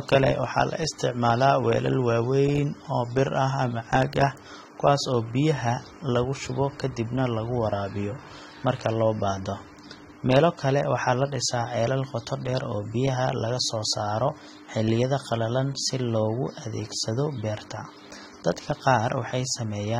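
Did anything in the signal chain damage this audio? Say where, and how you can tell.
Yes. Throughout, the speech sounds smeared with fizzy sibilants and nothing above 16.6 kHz, likely AAC compression at the codec stage, quantising too coarsely at a low bitrate.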